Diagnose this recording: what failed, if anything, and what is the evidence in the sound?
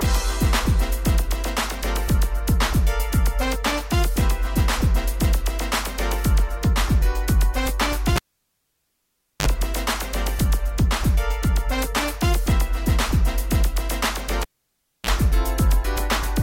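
A cable was pulled and plugged in twice on a live analogue connection. At 8.16 s a pop cuts the sound to near silence for about 1.26 s, then a 45 ms burst of 50 Hz mains buzz precedes a second pop as signal returns at 9.47 s. At 14.42 s the same sequence recurs: 0.63 s of near silence, a 32 ms burst of 60 Hz buzz, and a return pop at 15.10 s. The buzz occurs while only the plug tip makes contact, so the input picks up mains hum before the ground connects.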